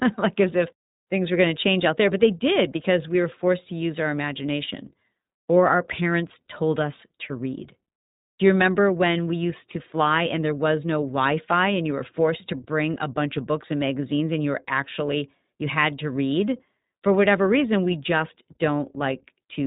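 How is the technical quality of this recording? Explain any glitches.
The speech has clearly audible codec damage throughout. iLBC codec, throughout: each short block is coded independently, consistent with 20 ms frames at about 15.2 kbps, leaving nothing above 3.8 kHz and a rough, synthetic edge.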